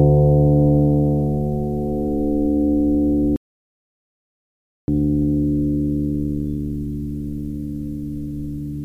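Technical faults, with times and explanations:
3.36 to 4.88 s, audio dropout to silence: the music cuts out mid-flow and about 1.5 s goes to dead silence, with no room tone at all, then it snaps back in. That's likely a lost input, with the recorder writing silence until the signal returned.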